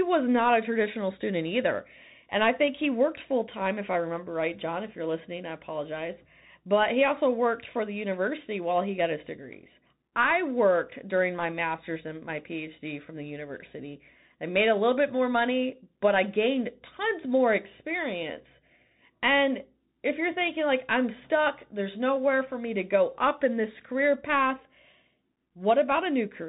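From start to finish the speech carries Bluetooth CVSD headset codec damage: everything stops sharply at 3.8 kHz, leaving an empty band above on a spectrogram. One-bit slope tracking, which fits a 64 kbps link, smears loud transients, roughens s sounds and lays granular hiss beneath the waveform.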